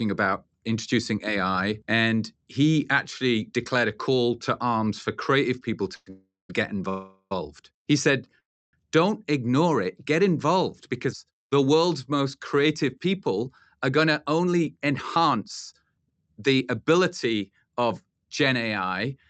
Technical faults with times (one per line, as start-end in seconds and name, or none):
5.95-6.50 call audio freeze
6.89-7.32 call audio freeze
8.40-8.74 call audio freeze
13.39-17.86 jitter buffer speed-up